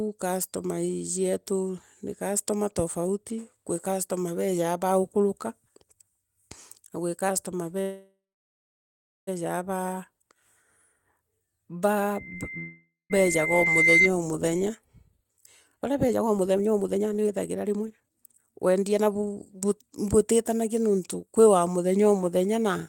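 At 7.81 s, just after "na gwi customer", a call audio freeze begins. The last sound carries on as a fading buzz and then falls to about 1.07 s of silence, filling 1.46 s in total. The likely cause is packets held up in transit, which let the jitter buffer run dry. The audio then resumes where it stopped, so nothing is lost but the delay grows by 1.46 s. On a waveform this shows as a decaying tail followed by a flat stretch. On a spectrogram the harmonics smear into a fading band and then go blank.

From 12.14 s to 14.11 s a loudspeaker feedback squeal builds at 2.1 kHz. The microphone was picking up its own loudspeaker, and at that frequency the loop gain rose above one. The tone swells over roughly 1.5 s to about 10 dB above the sound before it stops. A spectrogram shows it as one bright horizontal line, and the waveform envelope climbs steadily.

A second call audio freeze sits inside the squeal, from 12.58 s to 13.12 s. 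It fills 0.52 s, including about 0.17 s of silence, and is again likely from a starved jitter buffer.

Jitter buffer speed-up follows. From 14.69 s to 15.34 s the audio runs at 107% and sheds roughly 50 ms. From 15.76 s to 21.98 s it runs at 131% and sheds about 2 s. The receiver cut out short pitch-period slices to work off the delay that built up earlier. The audio sounds hurried while its pitch stays the same. On a spectrogram the harmonic spacing is unchanged but syllables and pauses are squeezed closer together. The waveform shows no gaps.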